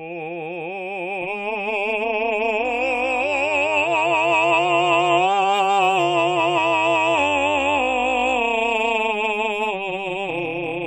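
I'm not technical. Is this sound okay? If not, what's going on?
No. From about 1.22 s to the end of the music, the sound has a fast, metallic buzz, with extra tones around each note. This is overlap-add ripple. The audio was chopped into short overlapping slices and stitched back together, but the overlaps don't blend evenly. The volume dips and swells with every slice, around 200 times a second, and the dips are deep, so the buzz is strong.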